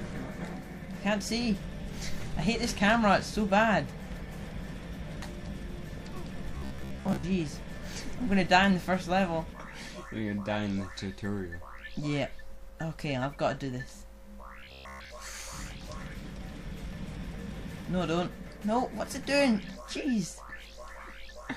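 Robotic sound from repeated short buffers appears from 6.58 to 7.24 s and again from 14.60 to 15.11 s: a rigid, metallic buzz at 66.7 Hz. The likely cause is starved playback looping a 15 ms fragment, skipping most of the real audio.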